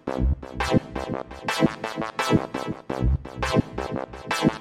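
No technical fault can be heard anywhere in the audio, and the signal stays intact and continuous for its whole duration.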